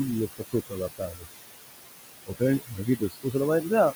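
Speech recorded over room noise that sits about 9 dB below the voice, with noise suppressor artifacts throughout. The suppressor pulls the background down by about 19 dB between phrases, and what survives rises under the voice as the gain changes frame by frame. A steady hiss would stay constant instead of pumping with the speech. The same processing also produces speech cut by the noise suppressor, at 0.28 to 1.28 s (roughly half a second affected in total), 2.26 to 2.42 s and 2.59 to 3.35 s, with drops of about 19 to 20 dB. Quiet parts of the voice were treated as noise and sound swallowed, unlike a dropout, where the whole signal would vanish abruptly.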